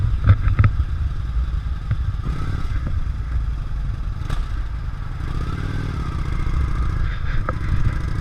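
A short blip of misplaced energy cuts through the audio from 2.25 to 2.28 s, peaking at around -10 dBFS. It is a corrupt frame decoded: bits inside one compressed frame were flipped, and the decoder played it anyway, reading wrong gains or codes that scattered energy into frequencies that don't belong there. The burst lasts about 23 ms, which points to a single damaged frame.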